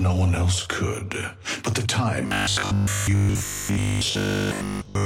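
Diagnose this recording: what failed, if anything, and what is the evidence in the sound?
Driver or buffer stage: from 2.27 s onward, a rigid 50 Hz buzz, robotic sound from repeated short buffers, likely 20 ms segments replayed in place of missing audio.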